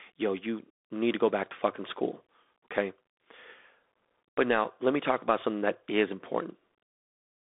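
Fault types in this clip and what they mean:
Bluetooth CVSD headset codec: the speech passes throughout a one-bit delta coder that signals only up or down each sample with an adaptive step, which fits a 64 kbps headset link. The band runs from 250 Hz to 3.6 kHz, with nothing above 3.8 kHz, and the coding damage is plainly audible: scratchy s sounds, loud peaks smeared where the step cannot keep up, and granular hiss underneath. That grain sets it apart from a clean telephone band limit.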